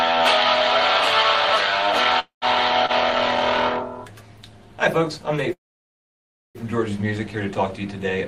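At 2.19 to 2.45 s the sound freezes: the last moment carries on as a fading buzz or hiss, then about 0.13 s of silence before the audio resumes exactly where it stopped, adding roughly 0.22 s of delay with nothing lost. Shortly after, at 2.86 to 2.92 s, a short stall from a late packet holds the current sound about 30 ms too long with a slight buzz or dip, as the receiver's jitter buffer briefly ran dry before continuing from the same point. A longer call audio freeze follows at 5.53 to 6.58 s. The held sound decays into about 0.99 s of silence, then playback picks up where it left off, now roughly 1 s behind. Both freezes were likely caused by packets held up in transit, emptying the jitter buffer until they arrived.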